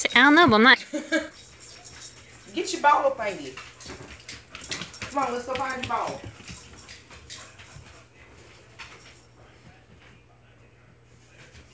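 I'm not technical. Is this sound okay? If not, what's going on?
No. A skip ahead at 0.74 to 0.76 s drops about a second of sound; the delayed audio was thrown away, so playback jumps straight forward without a pause.

A jitter buffer speed-up from 0.84 to 2.44 s plays at 117% speed, with the pitch unchanged. The player trimmed tiny slices, about a third of a second in all, to catch up.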